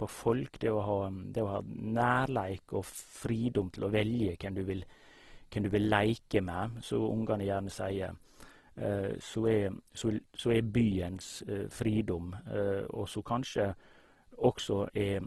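Speech that sounds grainy and rough from start to finish, with tones breaking into a noisy texture and nothing above 12.2 kHz. This is likely Opus compression in its CELT music mode, noise-filling starved bands, which fits a low bitrate near 16 kbps.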